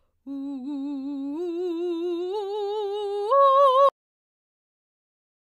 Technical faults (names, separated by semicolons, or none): cut-off end